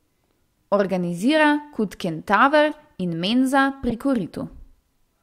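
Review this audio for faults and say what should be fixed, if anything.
Corrupt frames were decoded twice. An error at 2.71 to 2.74 s peaks near -30 dBFS. A louder error at 3.89 to 3.93 s peaks near -10 dBFS. Flipped bits misplaced energy across roughly two or three frames each. Adding error checking would let damaged frames be concealed rather than played.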